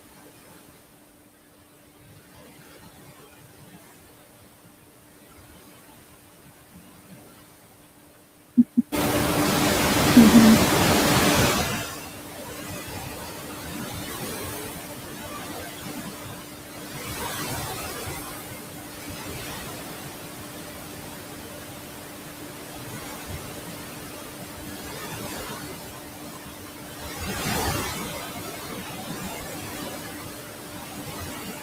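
Noise suppressor artifacts run throughout: the background drops by about 19 dB in pauses and rises under speech.

From 8.92 to 11.91 s, the noise suppressor is catching up. Room noise jumps by about 12 dB, and it leaks through before sinking gradually over 2.99 s rather than cutting abruptly.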